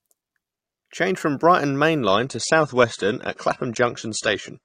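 At 2.07 s the speech switches abruptly, with no gap, to a lower-bitrate rendition from the adaptive stream, and stays there to the end. The connection evidently slowed, so the player dropped to a leaner encode: the treble thins and coding artefacts grow. A spectrogram shows energy ending sharply at 10 kHz from that point on, consistent with an AAC stream falling from around 96 to 32 kbit/s. The waveform shows no break.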